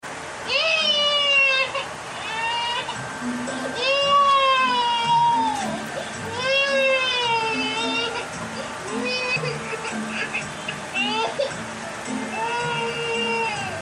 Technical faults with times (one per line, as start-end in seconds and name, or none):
4.81 compressed frames skipped
13.49 compressed frames skipped